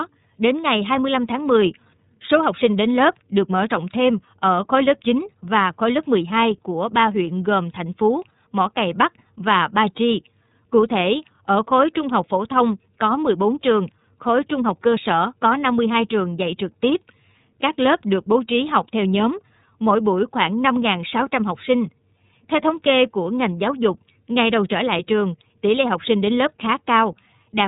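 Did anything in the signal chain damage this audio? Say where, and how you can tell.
Yes. The damage comes from the codec stage, and it runs through the whole speech clip. This is the iLBC codec. Nothing above about 3.8 kHz survives, so the top end is gone throughout. The speech stays intelligible but sounds plainly rough and synthetic. iLBC codes each frame's excitation on its own, without using the frame before. The texture fits 30 ms frames at a rate around 13.33 kbps.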